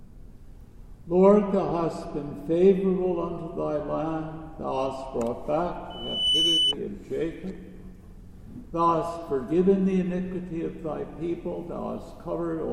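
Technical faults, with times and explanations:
5.90–6.74 s, loudspeaker feedback squeal: a pure tone at 3 kHz swells over roughly 0.4 s to sit about 5 dB above the programme, as the microphone re-amplifies its own loudspeaker output. On a spectrogram it is a bright horizontal line at 3 kHz; the waveform thickens into a dense sinusoidal envelope.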